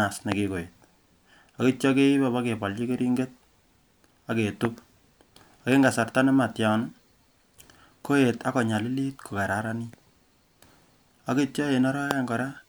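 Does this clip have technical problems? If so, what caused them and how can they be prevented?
Yes. Three loud pops, each a single sharp thump far louder than the speech, land at 0.32–0.34 s, 4.65–4.67 s and 12.11–12.13 s, with the speech continuing underneath. The likely cause is a brief voltage spike from a plug, switch, static discharge or driver glitch. Securing connections, avoiding switching during recording and grounding equipment against static would prevent them.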